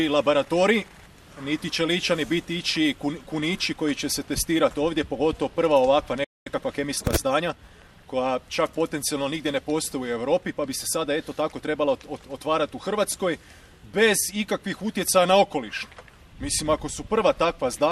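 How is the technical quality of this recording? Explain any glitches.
The recording has three glitches: one burst of digital radio corruption, then a short dropout followed by hurried playback.

From 2.68 to 2.74 s there is DAB burbling. Short blips of noise run over the sound, which fits about five corrupted audio frames. Reception was weak, with a bit error rate of about 0.15%, and enough errors got past correction to put short blips of noise into individual frequency bands.

At 6.24 s there is a playback stall. The sound cuts out for about 0.22 s, then resumes. The player likely ran short of data.

From 6.47 to 7.91 s there is time-compressed catch-up. The sound runs 1.15 times fast at normal pitch. The player is trimming its backlog by cutting and cross-fading small pieces.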